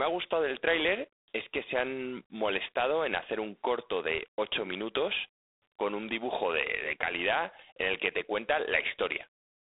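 G.726 ADPCM coding runs through the whole of the speech, from start to finish. Each sample is sent as a few bits of difference from an adaptive prediction, and the plainly audible harsh, rasping hiss that rises and falls with the speech level fits the coarse 24 kbit/s rate. The line band spans roughly 300 Hz to 3.7 kHz, and nothing reaches above 3.8 kHz, which leaves the sound dull and boxed in.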